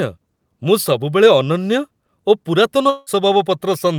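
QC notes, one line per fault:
2.89 to 3.09 s, long network dropout. The speech breaks off into a fading buzz lasting 0.17 s, with no silence after it. About 0.18 s of speech is lost before audio resumes. Likely cause: packets stopped arriving, so the receiver stretched the last sound.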